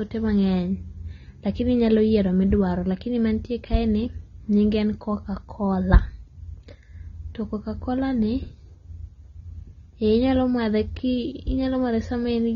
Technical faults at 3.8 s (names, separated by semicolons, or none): AAC compression